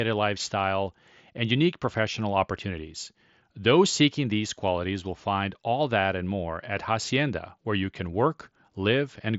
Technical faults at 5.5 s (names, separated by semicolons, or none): none